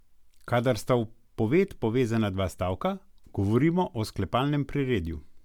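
Throughout the speech there is a swirly, hollow smear, and consonant attacks sound softened rather than crisp. That points to generation loss: the audio was most likely run through an MP3 encoder and decoder around four times at roughly 140 kbit/s. What sets it apart from a single low-bitrate encode is the bandwidth. Content still reaches about 20.1 kHz, so no heavy lowpass explains the damage. The artefacts come instead from quantisation noise and spectral holes piling up as each pass re-encoded on a shifted frame grid.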